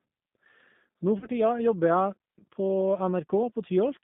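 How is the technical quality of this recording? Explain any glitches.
The quality is limited, since it's narrowband VoIP speech with one short dropout.

Throughout, G.729 coding caps the band at about 150 Hz to 3.6 kHz and rebuilds the voice from a filter and sparse pulses, so it sounds rough and slightly synthetic.

At 1.19 to 1.29 s, there's VoIP packet loss concealed by the speech codec. About 30 ms went missing, which fits three lost frames. The decoder stretched its last pitch and filter to fill the gap, fading out, and the voice stays weak briefly afterward.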